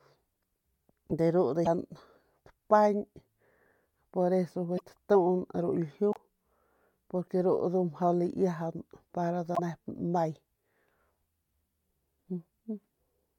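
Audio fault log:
1.65–1.67 s, 4.77–4.81 s, 6.11–6.17 s and 9.54–9.60 s (just after "para nda"), broken MP3 bit reservoir: the speech jumps forward and lands on a brief chirp, burst of noise or short hole, between about 30 and 65 ms long, roughly one to three blocks of 24 ms MP3 frames. The likely cause is missing frames: the frame after each gap reaches back into the bit reservoir for borrowed data, decodes bytes from the wrong frame, and garbles the output until the stream resynchronises.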